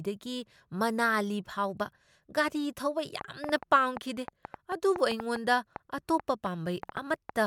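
From 3.21 s right through to 7.30 s there's a train of clicks riding over the speech: around twenty sharp, similar-shaped pops at roughly 4.65 per second, but unevenly spaced, so it ticks rather than pulses. They poke well above the speech, peaking about ten dB over it, and carry on through the gaps too. That pattern is likely interference from nearby gear or a faulty connection or power supply.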